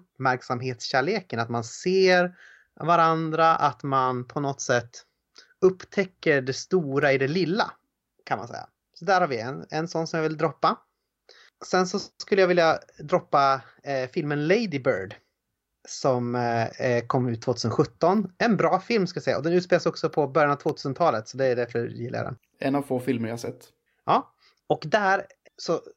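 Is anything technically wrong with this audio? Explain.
Yes. There is one electrical switching spike at about 7.03 s, between "upptäcker det" and "i det lilla kan". It is a sharp snap lasting only a few milliseconds. It sits on top of the speech rather than replacing it. It is fairly quiet, peaking around -30 dBFS. The likely cause is a nearby switch, motor or static discharge arcing briefly. The audio line picks up that burst of electrical energy as a click.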